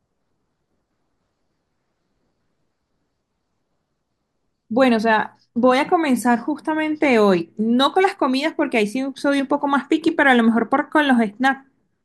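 Speech recording with no technical faults to report.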